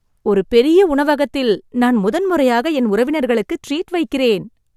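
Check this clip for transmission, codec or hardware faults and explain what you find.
Nothing in the speech signal points to a transmission, codec or hardware problem; it stays continuous and stable throughout.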